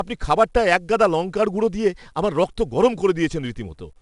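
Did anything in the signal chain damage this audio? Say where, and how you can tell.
Yes, at the codec stage: 4-bit ADPCM compression runs through the whole speech clip. A gritty hiss rides on the speech, rising and falling with its level rather than sitting as a steady floor, and the damage is plainly audible. Each sample is coded as a coarse 4-bit step from a predicted value, so the error scales with the signal. Nothing is present above 10.7 kHz, which points to roughly 89 kbps at a sample rate near 22 kHz.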